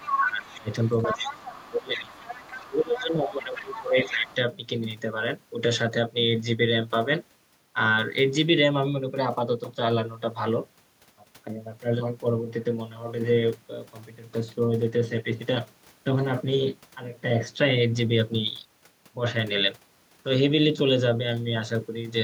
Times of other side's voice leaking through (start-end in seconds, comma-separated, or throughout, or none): 0.00-3.03, 3.54-4.35